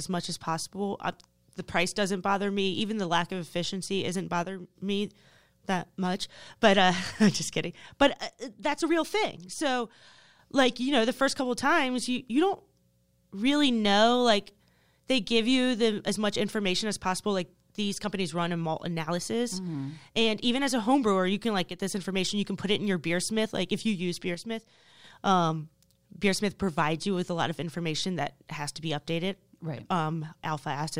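One channel drops out, most likely, four times in this speech: 4.43 to 4.76 s, 8.09 to 10.39 s (ending just before "like you know the"), 21.69 to 21.79 s (between "brewer you can like" and "this information"), and 24.35 to 25.04 s (between "if you use" and "um beersmith provides you"). Each time the level falls abruptly by about 6 dB and recovers just as suddenly, as though half of a summed stereo pair went missing.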